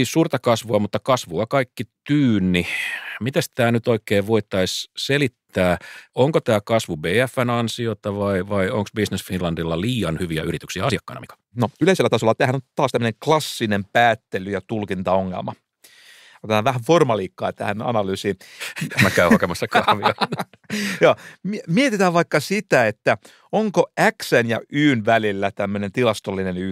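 From 10.13 to 13.07 s the speech suddenly runs faster, at about 1.39 times its normal pace, while its pitch stays where it was. This time-stretched section was likely produced by software squeezing the passage to fit a shorter length by dropping short slices of audio. It sounds rushed. On a spectrogram the harmonic spacing holds steady but syllables are compressed horizontally.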